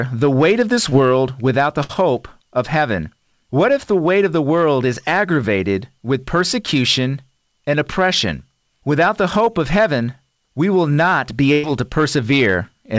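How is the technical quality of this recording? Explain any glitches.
The recording has two kinds of fault: steady hard clipping and four brief packet-loss glitches, heard through a call path whose G.722-style coding leaves nothing above 8 kHz.

Hard clipping runs throughout. The level is driven about 5 dB past what the chain can pass, so the peaks are sliced off. This gives crackle on loud syllables and flat-topped waveform peaks.

Short concealed packet loss occurs at 0.90 s, just after "the weight of this", and at 9.45 s, just before "of heaven we". About 20 ms went missing each time and was patched by continuing the preceding sound. Each is heard as a tiny smear and appears as a short blurred patch on a spectrogram.

Burst packet loss occurs at 1.84–1.91 s and at 11.53–11.65 s, just after "not be". About 60 ms and 100 ms were lost. The receiver extended the last sound while fading it, producing a held buzz or hiss. 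On a spectrogram these appear as smooth, repeated stretches.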